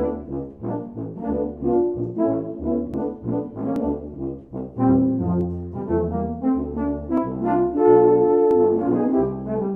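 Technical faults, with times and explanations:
2.94, 3.76, 5.41, 7.18 and 8.51 s: dropped buffer (overrun). At each point the sound jumps ahead with no gap of silence, most likely because incoming audio was overwritten before the program collected it, and the two sides were spliced together. The first skip loses around 40 ms, the second around 20 ms, and the last three only about 10 ms each. This forward jump, with nothing missing-sounding filled by silence or repetition, is what distinguishes it from a dropout or a stutter.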